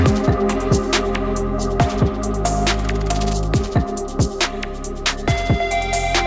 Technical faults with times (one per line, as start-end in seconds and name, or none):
none